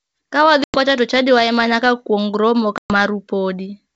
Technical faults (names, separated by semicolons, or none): packet loss on an ADPCM call